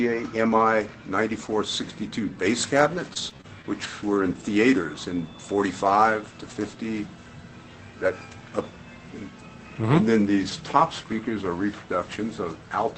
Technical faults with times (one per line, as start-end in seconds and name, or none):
3.13-3.85 repeated packet loss (robotic sound)
4.83 lost packet rebuilt from error correction